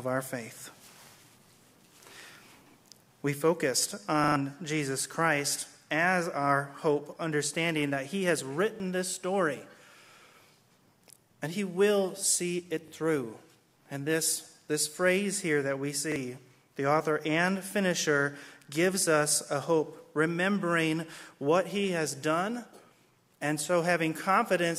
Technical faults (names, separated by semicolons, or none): repeated buffer